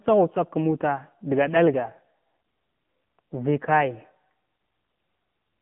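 AMR narrowband mobile codec damage runs through the whole recording, from start to finish. The speech passed through a phone-network coder that samples at 8 kHz and rebuilds each 20 ms frame from a vocal-tract model excited by a handful of pulses. Nothing survives above 3.6 kHz, and the line band sits at roughly 150 Hz to 3.5 kHz, so the sound is thin and boxy. The plainly audible buzzy, synthetic edge fits a low mode near 7.4 kbps.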